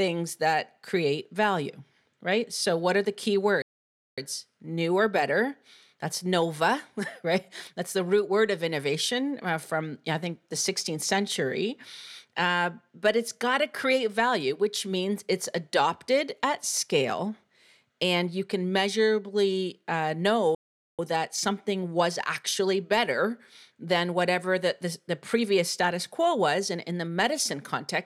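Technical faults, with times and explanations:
3.62–4.18 s and 20.55–20.99 s, playback stalls: the speech cuts out mid-flow for roughly half a second each time, about 0.55 s and then 0.44 s, before carrying on. That's likely the player running dry of data or its thread getting blocked briefly.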